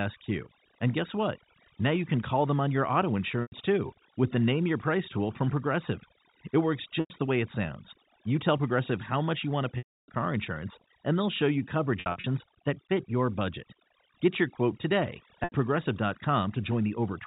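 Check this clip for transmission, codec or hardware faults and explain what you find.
Two faults are present: overdone noise removal throughout, and packet loss with pitch repetition at five points.

Overdone noise removal runs through the whole clip. Bands near the estimated noise floor are pushed down, so the background breaks into twinkling, warbling specks.

Packet loss with pitch repetition occurs at 3.42 s, 7.0 s, 9.78 s, 12.0 s and 15.44 s. The missing audio spans about 100 ms, 100 ms, 300 ms, 140 ms and 80 ms. At 12.0 s it is scattered over 240 ms, with the longest run 60 ms. The losses fit 20 ms packets. The receiver repeats the last pitch period and fades it over about 50 ms. The 300 ms gap fades into silence before the speech cross-fades back.

The telephone-band G.711 coding, which cuts everything above 4 kHz, is working normally.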